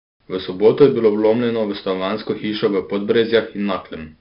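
A 4-bit ADPCM compression stage, at a rate that fits about 44 kbps, limits the speech to below 5.3 kHz and leaves a level-following gritty hiss throughout. From 0.67 to 0.85 s, just before "je bilo vlomljeno v", the signal overdrives a stage by about 3 dB, and hard clipping flattens the peaks into brief crackle.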